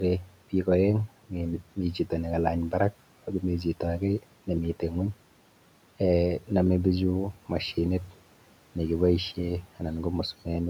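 From 0.20 to 0.36 s, the noise suppressor mistook part of the speech for background and pulled it down with the room noise, cutting it by up to about 13 dB. This is speech cut by the noise suppressor: for roughly 150 ms the sound turns swallowed and faint, sinking toward the room noise that sits about 24 dB below the speech.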